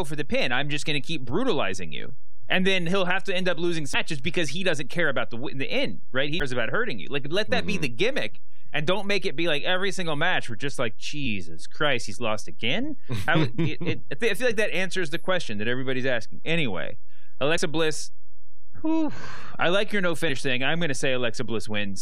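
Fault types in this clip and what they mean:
DC offset: The signal carries a constant shift away from zero for the whole clip, so the waveform sits off-centre from start to finish. It cannot be heard as a sound of its own, but it wastes headroom on one side of the waveform and shows up as steady energy at the very bottom of the spectrum, present under the speech and in the pauses alike.
Damaged data in a compressed stream: Some frames of the encoded stream arrived corrupted, so the decoder misread them, lost sync and had to hunt for the next valid frame header. Each hit is a brief chirp or blip of under 20 ms: at 3.94 s, right after "to end up losing" and before "because he doesn't care"; at 6.40 s, just before "about hurting you"; at 11.25 s; at 17.57 s; and at 20.28 s, right after "I like your no".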